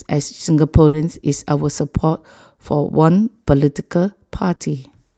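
At 0.87 to 0.95 s, a burst of packet loss hits the speech. The receiver stretches the last sound for about 60 ms, letting it fade, then jumps ahead with 60 ms missing. A spectrogram shows frozen, dimming bands ending in an abrupt restart.

At 4.55 to 4.61 s, a short concealed packet loss leaves about 40 ms patched by continuing the prior sound, heard as a brief smear. The waveform shows the patch blending back into real audio, and the codec's upper band ends near 8 kHz.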